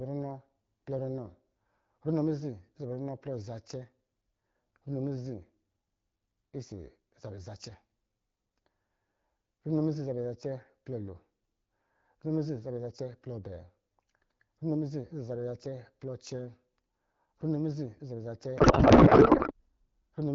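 From 18.57 to 19.52 s there is a codec payload misread: the receiving end appears to unpack the AMR wideband frames with the wrong bit layout, which fits octet-aligned AMR being read as bandwidth-efficient. The decoder therefore takes its parameters from shifted bit positions, and the speech, clear before this at 12.65 kbit/s apart from light codec softening, gives way to garbled noise and warble that barely tracks it.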